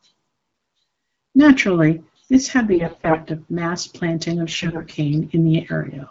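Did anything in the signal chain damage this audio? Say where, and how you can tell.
Yes, AMR bit errors on the radio link hit three stretches: 0.53 to 0.81 s, 2.71 to 3.18 s after "this had", and 4.47 to 4.95 s after "of mass planting of". The AMR-WB stream carrying the speech, which points to 12.65 kbit/s, sounds clear between these stretches, with only light codec damage. Within them, flipped low-priority bits misplace the excitation pulses and skew fine pitch, gain and spectral values, so the speech turns hoarse and gargly. The middle and last bursts are the roughest. This differs from packet loss because nothing drops out or mutes, and pitch and loudness hold steady.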